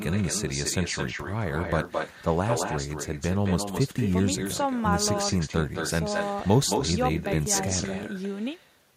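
From start to finish, the speech carries echo with no canceller. The far end is playing the call through a loudspeaker. Its microphone picks that sound up again, and nothing strips it out before it returns. Each phrase is followed by a second copy, delayed by about a fifth of a second. That copy sits about 6 dB below the direct speech. It sounds thinner, like a shadow trailing every syllable.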